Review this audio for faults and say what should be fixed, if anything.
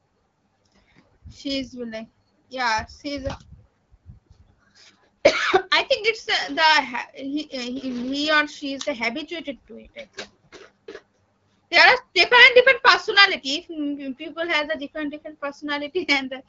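Nothing needs fixing; no faults can be heard here.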